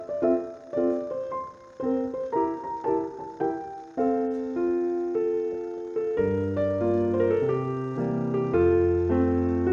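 From 6.18 to 8.06 s, a Bluetooth SBC bit pool drop dulls the treble and adds gritty noise, consistent with the bit pool halving from 28 to 14, roughly 108 kbps.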